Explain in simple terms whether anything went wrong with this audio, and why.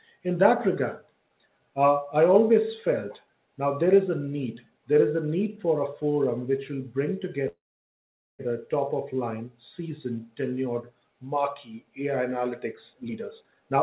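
Yes, two things went wrong. At 7.48 s there is a call audio freeze. The sound briefly trails on, then goes almost silent until 8.41 s, a gap of about 0.9 s. It then picks up exactly where it stopped, so nothing is lost, unlike a dropout. The likely cause is delayed network packets.

From 12.93 s to 13.77 s a jitter buffer speed-up makes the audio run about 1.34 times faster to cut the delay. Roughly a third of a second is trimmed out in tiny slices. Unlike a pitch shift, it sounds rushed but not higher.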